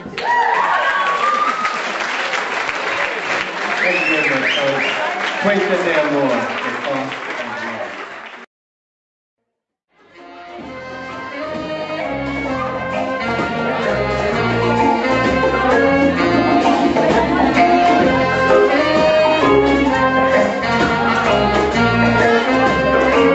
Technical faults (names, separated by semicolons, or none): none